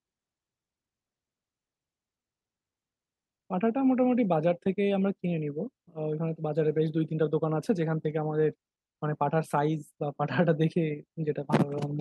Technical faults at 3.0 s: none

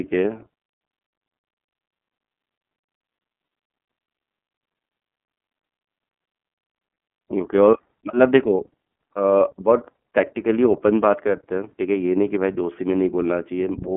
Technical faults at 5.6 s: iLBC codec

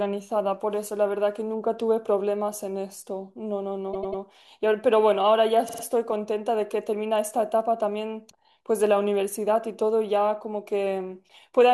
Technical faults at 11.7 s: none

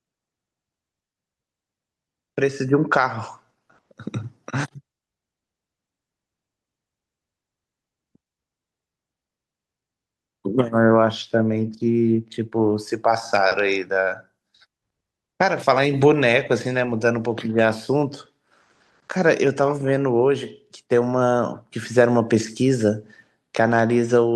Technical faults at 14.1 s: none

